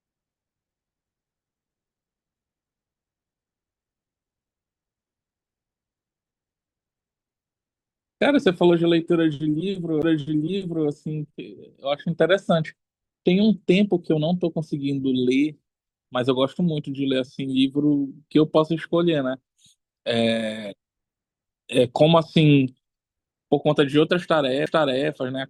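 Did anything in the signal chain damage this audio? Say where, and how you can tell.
Yes: CD skips during playback. The laser jumped tracks, leaving brief mutes of about 10 ms at 10.02 s and 7 ms at 24.66 s, each a tick before the speech resumes elsewhere.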